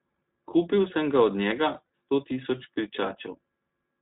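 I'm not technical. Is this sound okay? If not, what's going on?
No. The whole recording has gone through the iLBC codec, a phone-call style compressor. It throws away everything above 4 kHz, so the speech sounds thin and muffled. The voice also has a slightly rough, artificial edge throughout.

There is also a short glitch from lost iLBC frames, from 1.86 to 1.90 s, right after "sem ga od njega". About 40 ms of audio went missing. The decoder filled the gap by repeating the last bit of voice with some noise, so it sounds like a brief held buzz. Speech returns to normal almost immediately.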